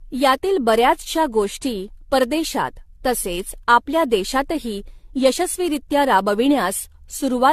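Generation loss runs through the whole clip. The speech sounds swirly, smeared and hollow, and attacks blur. Nothing reaches above 14.1 kHz. The likely cause is about seven rounds of lossy re-encoding, fitting AAC-LC at 64 kbit/s, each pass adding fresh noise.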